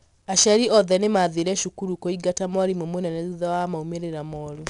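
From start to finish the speech carries 4-bit ADPCM compression, clearly audible. Each sample is coded as a coarse 4-bit step from a predicted value, with the step size adapting as it goes, so the coding error rides along as broadband grit that rises and falls with the speech level. Sharp onsets sound rough where the step lags behind the signal. Nothing is present above about 10.7 kHz, which fits a rate near 89 kbps.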